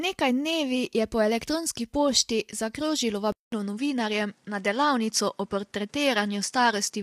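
From the start, the speech sounds rough and grainy, with hiss filling the spaces between voice harmonics. This is plainly audible low-delay AAC compression, likely AAC-ELD at a low bitrate of around 32 kbps. On a spectrogram the harmonic lines look smeared and noisy throughout.

At 3.32 s the sound drops out for 0.2 s, then returns duller and unchanged in level, with nothing above 11.4 kHz and a faint new background noise well below the speech. The likely cause is an input switched to a poorer device. A spectrogram shows a flat ceiling and the waveform a short gap.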